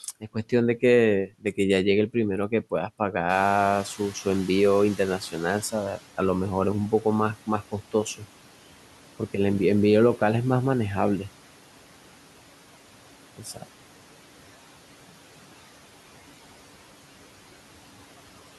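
A speech recording with noise suppressor artifacts throughout. The background is pulled down by about 12 dB, sinking between words and rising under them. Speech cut by the noise suppressor appears twice. At 1.27–1.58 s, roughly a tenth of a second of speech drops by about 13 dB. At 13.38–13.64 s, a brief stretch dips by about 8 dB. Those parts sound swallowed. The noise suppressor is catching up from 3.29 to 6.0 s. The room noise jumps by about 18 dB near 3.5 s. That noise leaks through at first, then sinks by about 11 dB as the estimate adapts over 2.71 s.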